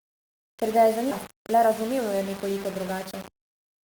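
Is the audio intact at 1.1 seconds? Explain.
No. At 1.11 to 1.13 s, right after "ga je", there is a skip ahead: about 0.7 s of speech is missing, and the sound on either side is joined almost directly with no silence between. That sets it apart from a dropout, which leaves an audible hole. Here nothing is lost in time. The delivery simply lurches forward, as when a jitter buffer overflows and discards audio while later audio is already waiting.

At 1.1 s, as across the whole clip, the audio also carries coarse, grainy distortion about 20 dB below the signal. It is likely low bit depth without dither, and the granularity fits roughly 5-bit samples with rounding. Because no dither was used, the error tracks the waveform, so the grit swells and changes with the speech and quiet parts turn rough or sputter. Dithered low-resolution audio would instead produce a steady hiss that stays independent of the sound.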